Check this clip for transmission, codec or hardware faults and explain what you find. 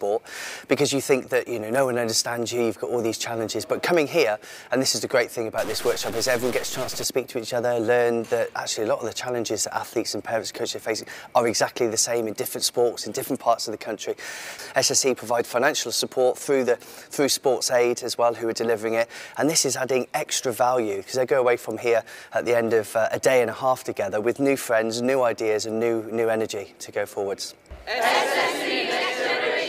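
One fault stands out, between 5.58 and 7.04 s. There the audio turns harsh and buzzy, with a gritty distortion riding on the signal and a noise floor that fills any quieter moments. The likely cause is a stuck bit: one data bit held fixed by a broken line or converter, so about half the samples jump by a step of around -30 dBFS. Because that bit also flips with the sign of small values, low-level passages become noisy.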